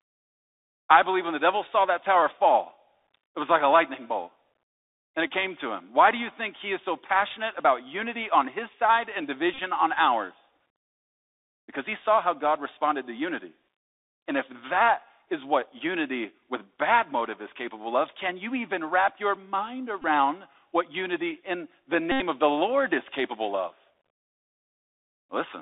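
Speech heard through a Bluetooth CVSD headset codec for the whole clip, with the band held to about 300 Hz to 3.7 kHz. The codec damage is plainly audible: scratchy s sounds, granular hiss under the speech, and distortion where loud high sounds outrun the one-bit delta step, consistent with 64 kbps CVSD. A spectrogram shows a hard ceiling near 3.7 kHz and a grainy noise floor. Bluetooth headset packet repeats, where lost packets are replaced by replaying the previous one, cause short buzzes at 5.28–5.30 s, at 9.54–9.59 s between "on his side and" and "on ours", at 20.02–20.04 s after "even wrap your mind", and at 22.12–22.21 s between "what unity in the" and "of the". The last fits about 22 repeated 3.75 ms packets. On the waveform these appear as identical cycles. On a spectrogram they show as striped harmonics near 267 Hz.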